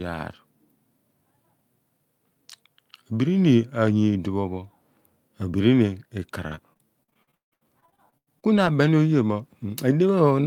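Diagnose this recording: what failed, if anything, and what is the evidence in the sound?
The network stage failed, showing repeated packet loss (robotic sound) from 6.47 s to 8.68 s. Across that stretch the speech breaks into choppy fragments. There are 18 gaps, the longest 170 ms. The receiver patched about 680 ms by extending the last sound, roughly a third of the span, while about 720 ms is simply missing. On a spectrogram, frozen, smeared harmonics alternate with hard-edged holes. The waveform shows repeated, looped-looking cycles broken by abrupt drops.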